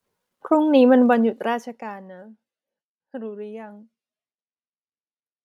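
Speech with zipper noise from 1.02 to 2.09 s, where a roughly 20 dB drop arrives in about forty unsmoothed steps per second, ticking audibly; the waveform shows a staircased envelope, and the spectrogram shows faint vertical click lines.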